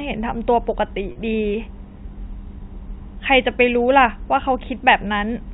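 Speech over a telephone-band line, with two brief packet loss with pitch repetition events: one from 1.12 to 1.15 s, lasting about 30 ms and consistent with three 10 ms packets, and a single short one at 4.41 s. Instead of silence or a click, each gap is filled by a slightly held, buzzy copy of the last pitch period. That repetition separates it from a plain dropout or clipped-out segment. The G.711 coding itself limits the sound to below 4 kHz.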